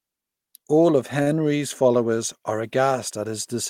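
At 1.22 to 1.28 s, a short stall from a late packet occurs. A packet missed its playout time, the jitter buffer emptied, and the receiver held the last sound for 42 ms until it arrived. The speech resumes where it stopped with nothing lost, but everything after plays 42 ms later, with a brief smeared sustain.

From 2.51 s to the end, quiet passages turn grainy and gritty, with distortion that follows the speech and a noise floor roughly 45 dB below it. This is likely low bit depth without dither, which fits truncation to about 10 bits, so the rounding error tracks the signal instead of masking it.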